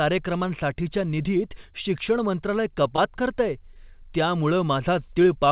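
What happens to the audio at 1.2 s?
Nothing goes wrong at 1.2 s: the speech continues intact through the call path, with its usual telephone-band character and nothing above 4 kHz.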